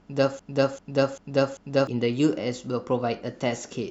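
A short speech recording with a broken-record loop running from 0.39 s to 1.87 s. A fragment about 392 ms long plays four times in a row, identical each pass, so the same sliver of sound stutters back to back for nearly one and a half seconds. Whatever should have been heard in that span never arrives. The likely cause is a stalled player, encoder or stream that kept resending the last buffer it held.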